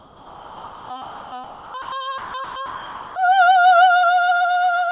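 From 0 to 0.9 s, 1.02 to 1.32 s and 1.44 to 1.74 s, comfort noise replaces the background. The music's real quiet background, about 20 to 22 dB below its loud parts, becomes a steady, featureless hiss, about 2 to 4 dB quieter. This is likely discontinuous transmission filling pauses with synthetic noise.

Sound dropped by the voice detector comes at 1.82 to 1.92 s, 2.18 to 2.34 s, 2.44 to 2.56 s and 2.66 to 3.16 s. Music itself, not just background, vanishes into that same flat noise, likely because the detector mistook it for silence. About 300 ms of music is lost in the last gap.

Throughout, nothing sounds above 4 kHz, which fits a G.711 call path.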